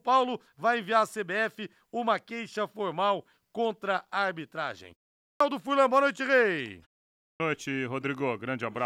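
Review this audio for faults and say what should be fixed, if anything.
Speech resumes abruptly at 5.26 s, just after "formal contra a arbitragem", and again at 7.25 s, its opening sounds missing both times. This is a clipped start after a pause: the output device sleeps through the 0.38 s and 0.47 s gaps and needs about 144 ms and 149 ms to wake. Keeping the output stream active through silence, or pre-rolling it before playback resumes, would prevent this.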